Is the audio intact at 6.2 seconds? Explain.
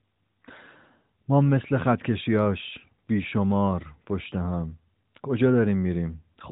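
Yes, the speech at 6.2 s is intact, carrying only the narrowband band limit of the AMR mobile codec that runs through the whole recording.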